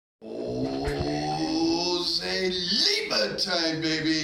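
No technical faults can be heard anywhere in this audio.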